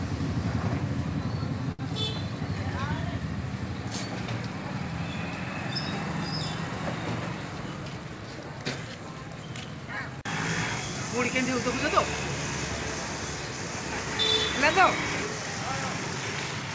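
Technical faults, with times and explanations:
1.72–1.81 s, short stall from a late packet: the jitter buffer ran empty, so the last sound was stretched by 70 ms until playback resumed from the same place.
7.52–8.05 s, jitter buffer speed-up: excess buffered audio was cut back by repeatedly removing short pitch-period pieces, roughly 70 ms in all, so the sound runs at 113% speed, unchanged pitch, hurried.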